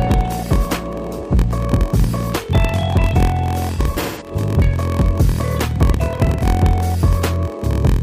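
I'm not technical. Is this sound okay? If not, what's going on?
No. A low buzz runs through the whole clip at about 43 times per second, and everything plays slightly slow, at roughly 94% of normal speed. This is a block size mismatch (padded). One stage hands over audio in chunks shorter than the next stage expects, which fits 1024-sample blocks, and fills the remainder with silence. Those tiny gaps repeat, making the buzz and stretching the timing.

Single sharp clicks occur at 1.64 s and 2.94 s. The likely cause is dropped samples. A sliver of audio, well under a millisecond, went missing, so the sound jumps abruptly from one point to a slightly later one instead of flowing smoothly.

Between 3.75 s and 4.31 s, and again from 6.25 s to 6.45 s, the sound turns smeared, hissy and hollow. This is AAC frame loss with concealment. Small pieces of the compressed audio were lost: about 0.3 s in total spread over the first stretch, with the longest gap around 0.15 s, and 0.13 s in the second. 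The player patched the holes by guessing from the sound just before them.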